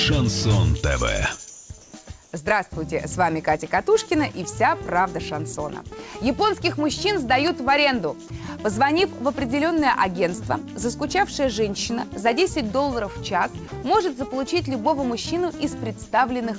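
Between 1.50 and 1.70 s, 1.82 and 1.92 s, and 2.24 and 2.32 s, the background turns into a flat, featureless hiss at about the same level. This is likely comfort noise in place of the background, inserted during transmission pauses. At 13.68 s a 40 ms patch of steady noise swallows roughly 20 ms of sound, likely sound dropped by the voice detector, which misjudged it as background. Throughout, nothing reaches above 8 kHz, as expected from a wideband call codec.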